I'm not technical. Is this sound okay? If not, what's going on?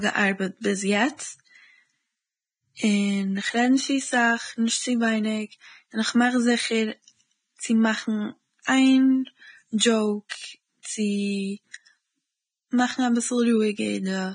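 No. The speech sounds dull, grainy and hissy all the way through, with nothing above about 9.7 kHz, likely from heavy Vorbis compression squeezing the file too hard. At 10.29 to 10.31 s and 10.83 to 10.85 s, a brief hiss comes just before sharp sounds and smears them. This is pre-echo, where compression noise leaks ahead of the sudden sound.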